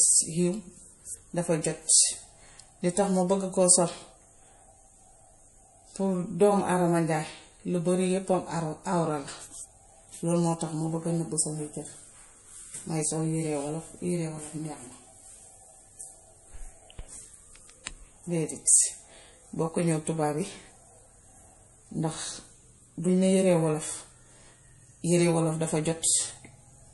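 MP3 compression throughout: nothing above 11.5 kHz, plus plainly audible watery or swirly artefacts, likely from a bit-starved encoder, perhaps near 48 kbps, zeroing weak frequency lines.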